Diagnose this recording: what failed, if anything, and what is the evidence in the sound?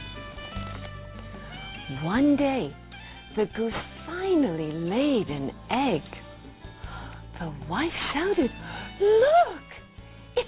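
Aliasing is the culprit here, and it's at the sample-rate conversion stage. It runs for the whole clip. The top end sounds gritty and metallic, with odd tones that don't track the sound's real pitch, and the spectrum piles right up against about 4 kHz. That fits a drop to an 8 kHz rate with no anti-alias filter. Everything above 4 kHz folded back down as fake content, sitting roughly 20 dB under the signal.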